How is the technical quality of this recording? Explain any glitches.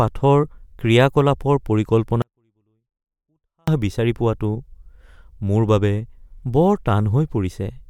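The recording has one clear fault: a 24-bit alignment error that makes the speech drop to near silence for about 1.5 seconds. From 2.22 s to 3.68 s the level falls by about 48 dB at once and returns just before "বিচাৰি পোৱাটো". Samples held as 24-bit integers in the low bytes of a 32-bit word were read as full 32-bit integers, so every value is 256 times too small. The waveform keeps its shape, so the passage sounds clean but is barely audible.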